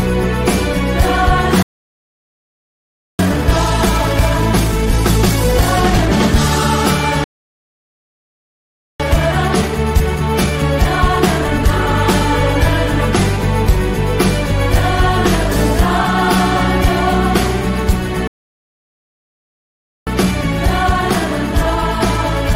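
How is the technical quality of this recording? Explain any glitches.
The recording is marred by three playback stalls, each followed by a time-compressed catch-up.

Playback stall: the sound halts mid-flow and falls silent from 1.63 to 3.19 s, 7.24 to 9.00 s, and 18.27 to 20.07 s, gaps of about 1.6 to 1.8 s. The player likely ran out of buffered data or had its output thread blocked.

Time-compressed catch-up: right after each gap the audio rushes along at normal pitch, at 1.5 times speed from 3.19 to 6.19 s, 1.25 times from 9.00 to 12.00 s, and 1.15 times from 20.07 s to the end, as the player snips and cross-fades small pieces to clear its backlog.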